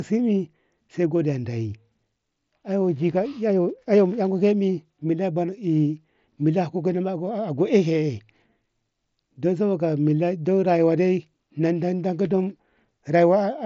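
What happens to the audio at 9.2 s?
Nothing goes wrong at 9.2 s: the speech carries on intact through that moment, passing through the mSBC Bluetooth headset path as it does everywhere.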